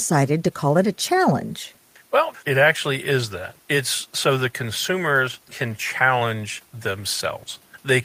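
Nothing in this speech recording stands out as a technical fault. The audio runs without any audible interruption or disturbance.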